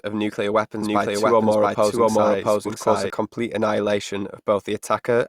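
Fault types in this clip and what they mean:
Doubled audio track, 0.82 to 3.10 s: a second copy of the speech runs about 0.7 s behind the original at roughly the same loudness, so each phrase is heard twice, overlapping the next. The copy is full-band, with no decay or added room colour, and it starts and stops abruptly, cutting out just before "complete annihilation". This is likely a second capture through a slower path being mixed back in with the direct signal.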